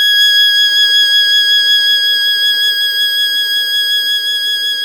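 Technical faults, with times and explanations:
No technical faults detected.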